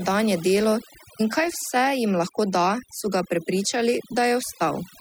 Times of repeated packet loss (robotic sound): none

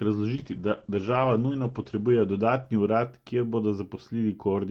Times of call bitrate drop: 0.36-4.07

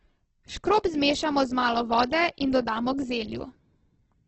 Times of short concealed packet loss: none

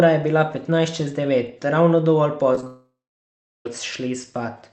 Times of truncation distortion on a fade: none

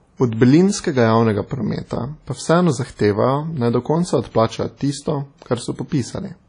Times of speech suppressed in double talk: none

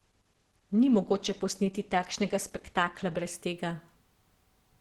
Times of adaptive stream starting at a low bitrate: 0.00-3.31

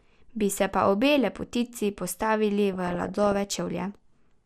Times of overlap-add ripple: none

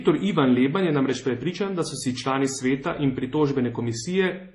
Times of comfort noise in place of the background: none

